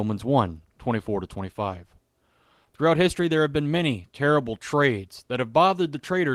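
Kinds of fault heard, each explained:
No technical fault can be heard anywhere in this speech recording. There is nothing to explain under any heading.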